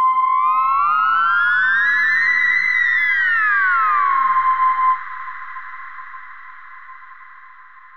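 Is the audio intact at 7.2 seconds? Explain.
Yes, at 7.2 seconds the audio plays through cleanly with no dropout, click, distortion or other fault.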